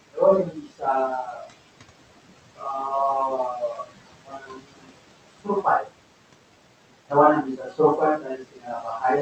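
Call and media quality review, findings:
Noise suppressor artifacts, whole clip: room noise, which sits about 12 dB under the speech, drops away between phrases and swells back up under the talker. Component is the noise suppressor, attenuating the bands it classifies as steady noise by about 20 dB, frame by frame.

Speech cut by the noise suppressor: speech goes faint or swallowed at 0.12–0.84 s, 1.25–1.51 s, 2.56–2.66 s, 3.54–4.92 s, 5.38–5.93 s, 7.43–7.79 s and 8.18 s to the end. Dips reach about 13 to 22 dB, and the longest stretch, 3.54–4.92 s, loses roughly a second. The suppressor is misreading quiet speech as noise and pulling it down with the background. Audio above 8 kHz is absent, consistent with the Opus call path's bandwidth limit.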